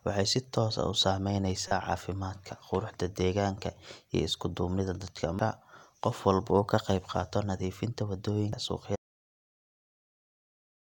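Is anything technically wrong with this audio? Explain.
Yes. Three brief glitches break up the speech: one from 1.68 to 1.72 s, just before "caafimaadka quruxda deegaanka iyo", and single blips at 5.39 s and 8.53 s, the last right after "ka qayb qaato nadiifinta". These are damaged data in a compressed stream. Corrupted bytes made the decoder misread frames and skip ahead to the next valid header.

From 8.96 s to the end the sound cuts off into complete silence, with no room tone at all. This is an audio dropout to silence, likely caused by the input signal being lost while the recorder kept writing silence.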